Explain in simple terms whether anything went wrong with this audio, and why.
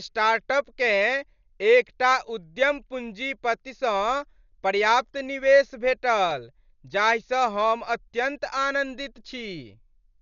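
The whole recording sounds dull and muffled, with nothing above 7 kHz. A rough, fluttering noise clings to the speech from start to finish. This is likely heavy Dolby Digital compression. The encoder dropped the high sounds and the decoder filled the gaps with noise.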